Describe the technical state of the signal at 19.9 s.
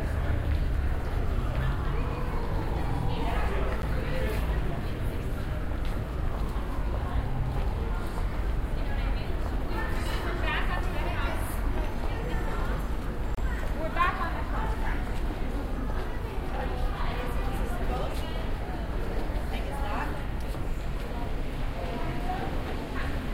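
At 19.9 s the audio is intact, with no technical fault to be heard at that moment.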